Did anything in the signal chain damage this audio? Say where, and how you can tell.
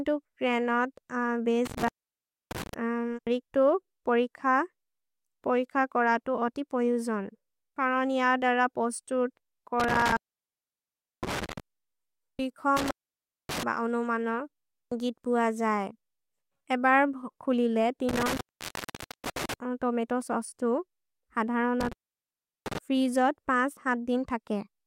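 Yes. The damage happened in the analogue wiring, where an intermittent contact in a cable or plug briefly lost its connection. The speech cuts out five times: at 1.66–2.74 s, 9.80–11.60 s, 12.77–13.63 s, 18.09–19.54 s and 21.81–22.78 s. The actual gaps last 0.63, 1.06, 0.59, 0.89 and 0.73 s. Crackle marks each point where the contact breaks and remakes, and faint hiss remains while the line is open.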